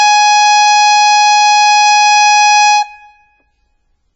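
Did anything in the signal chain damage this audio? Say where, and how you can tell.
Yes: the music sounds watery and swirly throughout, with nothing above 7.8 kHz. This points to the codec stage, likely MP3 compression so short of bits that treble is cut and weak lines dropped.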